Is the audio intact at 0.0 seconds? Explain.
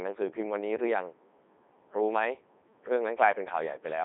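No. From 0.0 seconds onward the speech runs through a Codec 2 vocoder, which fits its 3.2 kbit/s mode. Only pitch, voicing, energy and a spectral envelope survive, then the decoder rebuilds them from sine waves. The result is robotic and buzzy, confined to 300 Hz to 3.7 kHz, with nothing above 3.8 kHz.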